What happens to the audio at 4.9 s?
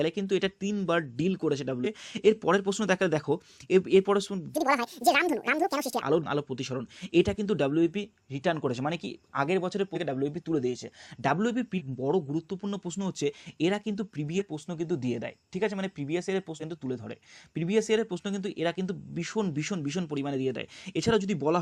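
At 4.9 s the audio is inside a section at the wrong speed, running from 4.54 to 6.02 s. It plays about 1.8 times too fast, likely from being fitted to the wrong clock. Pitch jumps up by roughly ten semitones, and the sound turns high and hurried.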